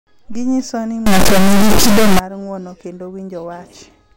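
From 1.06 to 2.19 s the speech turns into a harsh, extremely loud buzzing square wave: an integer read as float fault, where 32-bit integer samples are read as 32-bit float. On a waveform it slams between zero and the clipping limit. A spectrogram shows dense broadband harmonics.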